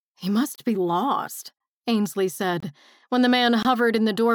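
A gap between chunks occurs where the audio was delivered in one-second pieces and silence was inserted at the joins, at 0.56 to 0.58 s, 2.60 to 2.63 s and 3.63 to 3.65 s. Each leaves a 23 ms hole, interrupting the sound without removing any of it.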